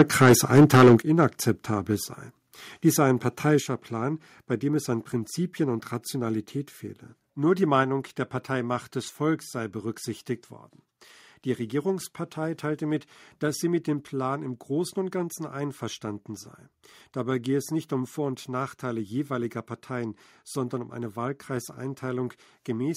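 Microphone overload runs from the start of this speech clip to 0.95 s. The loudest syllables have a harsh, crackling edge because their peaks are pushed about 11 dB past the converter's limit, with roughly 15 percent of samples flattened at that limit. That points to the input gain likely being set too high for the converter. Microphone volume stepped down then occurs twice, at 1.02 s and 3.6 s. Voice and background together drop abruptly by about 8 dB and then about 5 dB. The first step follows directly after the distorted opening, which is consistent with the call software likely reacting to the clipping by lowering the device's input volume in discrete steps.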